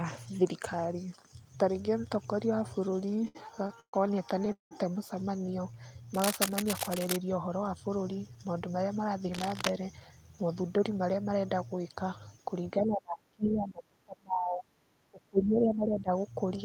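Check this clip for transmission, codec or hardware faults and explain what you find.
Yes, there's quite a bit going on in this speech clip, with five kinds of fault spread across it.

From 2.91 to 3.95 s there's a run of repeated stalls, a stutter. The speech keeps hanging for a moment, twelve times in that second or so, with the longest hold around 130 ms and about 297 ms filled in total, nearly a third of the stretch. Packets were arriving late or too slowly, so the jitter buffer kept running dry and the receiver stretched the last sound each time. Nothing drops out, but it drags and stutters.

At 4.52 to 4.73 s you get what sounds like a call audio freeze. The sound hangs as a fading continuation of the last bit, then goes silent for about 130 ms before picking up right where it left off, 190 ms later than it should. The likely cause is packets held up in transit emptying the jitter buffer, so a gap was slotted in rather than anything lost.

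Cable scratch noise shows up twice, from 6.14 to 7.16 s and from 9.33 to 9.69 s. It's dense, ragged rustling sitting over the speech at only about 5 dB below it, so it's pretty intrusive. That's the sound of contact resistance jumping around, most likely a worn cable, connector or control being moved.

Between 7.48 and 8.30 s there's a jitter buffer speed-up. The speech runs at about 108% of normal speed without any pitch change and sounds a bit hurried. The buffer had built up more audio than it wanted, so the receiver trimmed out tiny pitch-period-sized slices again and again, around 70 ms in all, to pull the delay back down.

From 12.79 to 16.10 s the speech gets chopped and ducked, dipping by about 30 dB at its deepest, with roughly 3 s of that stretch affected in pieces. That pattern looks like speech suppressed in double talk. Probably both ends were talking at once, and the echo canceller couldn't tell this talker from the loudspeaker echo, so it turned everything down.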